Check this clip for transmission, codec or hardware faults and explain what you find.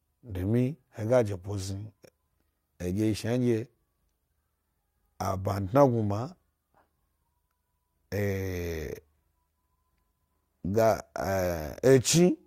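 Nothing in this recording points to a fault in how it was carried, encoded or captured. There is nothing to report.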